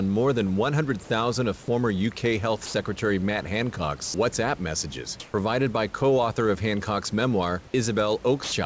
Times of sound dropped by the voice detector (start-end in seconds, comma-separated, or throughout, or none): 2.66-2.74, 4.06-4.14, 8.44-8.52